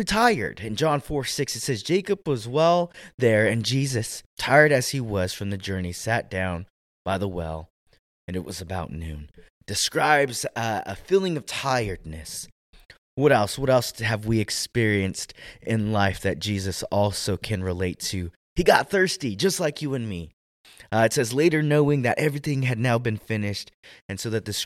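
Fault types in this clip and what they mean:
No faults can be heard.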